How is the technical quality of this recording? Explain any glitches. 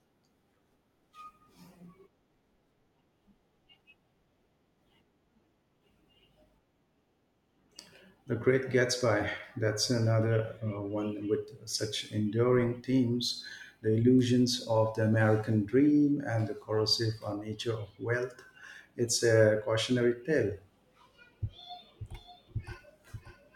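One glitch stands out near the end. A doubled audio track starts at 22.00 s and runs to the end, most likely from a second, slower capture path mixed in. A full-band copy of the speech trails about half a second behind, roughly 10 dB quieter, with no decay or room colour, and it cuts in abruptly.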